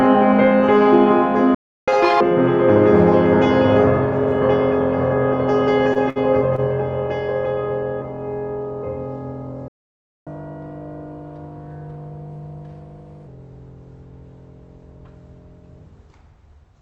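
At 1.55 s the player most likely ran short of data or had its thread blocked, causing a playback stall: the music cuts to silence for about 0.33 s and then resumes where it left off. From 1.88 s to 2.21 s the player works off its backlog in a catch-up at higher speed, resampling at 2.0 times normal rate. The passage rushes by with its pitch raised by roughly ten semitones before snapping back to normal.

Around 6 s a short stall from a late packet occurs three times, at 5.93 s, 6.10 s and 6.56 s. Each time a packet was missing when due, the jitter buffer emptied, and the receiver stretched the last bit of sound until the packet arrived, adding 23 ms, 60 ms and 23 ms of delay respectively. Nothing is lost, but the music briefly hangs on a held moment.

A longer playback stall begins at 9.68 s, again most likely from data starvation or a blocked thread. The music falls silent for about 0.58 s and picks up at 10.27 s. 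The catch-up that follows is gentler and longer, running at 1.15 times speed until 13.27 s. For those three seconds the music plays audibly quick and sits about two semitones sharp, then settles back. Throughout, the top end is capped near 8 kHz, which points to a call codec path.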